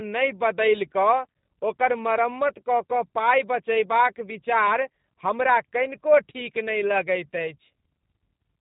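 Throughout, the speech carries plainly audible G.729 codec roughness, synthetic and buzzy from pulse-based rebuilding, not just a clean cut above 3.8 kHz, fitting 8 kbit/s.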